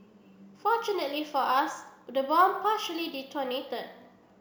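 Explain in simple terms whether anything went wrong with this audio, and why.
A gritty, fizzy buzz rides along with the speech for the whole clip, from the first second to the last, and gets stronger on loud and sharp, hissy sounds. It doesn't follow the pitch of the voice, so it sounds unrelated to it. This is crude rate conversion. The audio was stretched to a higher sample rate by simply repeating some samples instead of smoothing between them. The repeating pattern fits a change from 32 kHz to 48 kHz, and its regular jumps create those stray tones.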